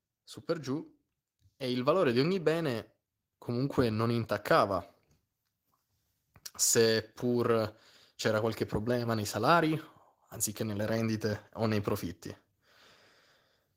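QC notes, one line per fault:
0.46–4.3 s, automatic gain rising: the automatic gain control judged the input too quiet and pushed its gain up steadily by about 7 dB over nearly four seconds, so the speech and the background noise swell louder together rather than the level holding steady.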